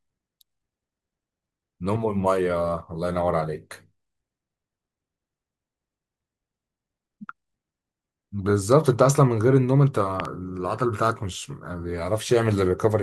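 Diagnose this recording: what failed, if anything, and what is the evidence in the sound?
A loud pop, a quick double pop, lands between 10.2 and 10.27 s, standing well above the speech level while the speech carries on beneath it. The two closely spaced transients sound like an electrical pulse added to the signal, most likely at the analogue wiring stage, from a connector, switch or static discharge. The circuitry downstream shapes each spike.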